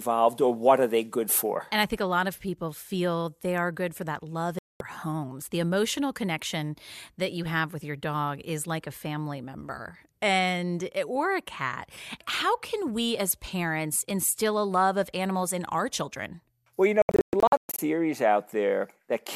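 At 4.59 s, just after "good for that love", a digital broadcast dropout mutes the speech for 0.22 s. The receiver lost valid frames and went silent. At 17.02–17.79 s it recurs as several short holes, the longest 0.12 s. The missing speech never returns.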